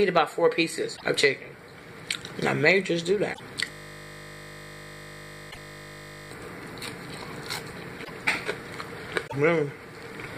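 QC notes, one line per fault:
0.96, 3.33, 5.50, 8.03 and 9.26 s: broken MP3 bit reservoir. Each event is a short burst of about 70 ms where the audio jumps ahead and smears into a chirp or noise. The likely cause is frames dropped from the stream, so the next frame pulls reservoir data from the wrong frame. The damage spans two to three 26.1 ms frames.
3.71–6.31 s: system hang loop. A single 20 ms slice of audio repeats exactly for about 2.6 s, producing a steady 50 Hz buzz in place of the program. This is the output hardware cycling one ring buffer while the host stalled.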